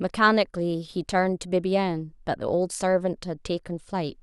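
No technical faults can be heard anywhere in this recording. The speech continues without any audible disruption.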